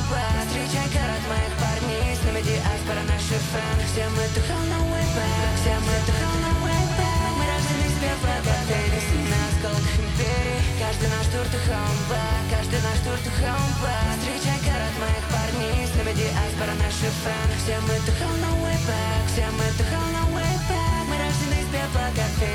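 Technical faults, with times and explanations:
5.06–9.48 s, doubled audio track: a second, full-band copy of the sound runs about 300 ms behind the original and roughly 5 dB quieter, giving a hard slapback rather than a reverb tail, likely from a second, slower capture path being mixed in. It switches on and off abruptly. On the waveform each transient repeats at a fixed offset; the spectrogram shows every onset duplicated at that lag with identical spectral shape and no smearing.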